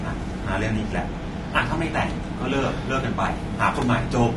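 From start to finish, the speech carries plainly audible codec damage. The voice sounds rough and grainy rather than smooth. The likely cause is low-delay AAC compression, the AAC-ELD type used for video calls. It codes audio in very short frames. Short frames resolve the pitch harmonics of a voice poorly and need more bits. Here the damage fits a bitrate around 32 kbps, too low to hide that weakness.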